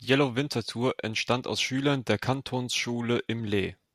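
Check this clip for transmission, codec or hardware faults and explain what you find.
Nothing here needs flagging; I listened for trouble in the transmission, the codec and the hardware and came up empty.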